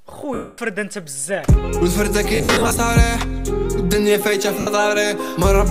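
Lost LE Audio frames occur at 0.34–0.58 s, 2.35–2.79 s and 4.60–4.67 s. The decoder fills each gap with sign-scrambled repeats, leaving a noisy smear.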